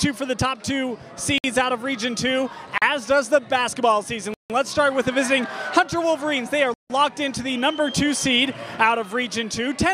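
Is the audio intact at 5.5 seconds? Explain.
Yes, at 5.5 seconds the audio plays through intact, with no dropout, click, distortion or other fault at that moment.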